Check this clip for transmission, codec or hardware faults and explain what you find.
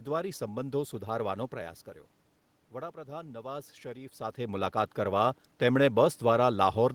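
One fault is present: automatic gain rising, from 2.72 s to 6.07 s. After the input level falls by about 12 dB, the gain control slowly adds about 7 dB over more than three seconds. The voice and the room noise swell together, which separates this from the talker's own movements near 1.5 s and 4 s.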